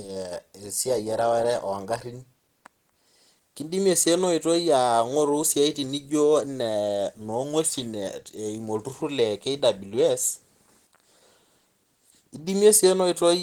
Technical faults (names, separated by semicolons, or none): Opus compression